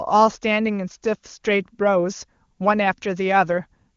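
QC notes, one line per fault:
The speech carries the band-limited sound of an AMR wideband (HD Voice) codec with at most faint coding damage, which fits one of its highest bitrates, and no faults are present.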